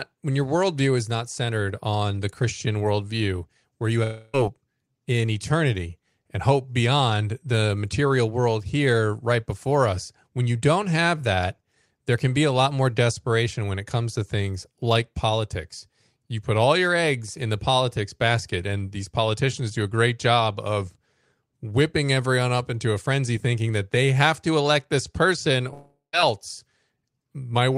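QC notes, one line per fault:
4.03–4.35 s, long network dropout: after "worldview where you", about 300 ms is replaced by a fading buzz continuing the last sound, likely concealment of missing audio. Speech resumes with that stretch lost, not delayed.
25.73–26.15 s, long network dropout: after "to elect this person", a fading continuation gives way to about 140 ms of silence. The audio returns without the likely missing 400 ms rather than picking up where it stopped.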